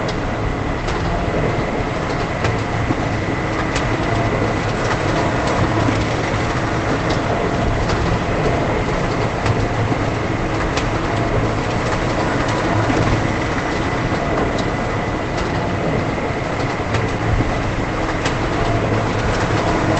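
No faults heard in these sounds; the call path passes them with the top end stopping at 8 kHz, as expected for that link.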